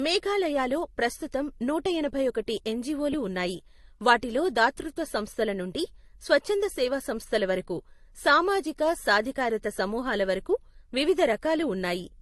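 Throughout the speech, transcoding between lossy codecs likely took place. The sound fits MP3 at about 48 kbit/s re-encoded as Opus at about 32 kbit/s. Nothing remains above 12.1 kHz, and the artefacts of both codecs are heard together.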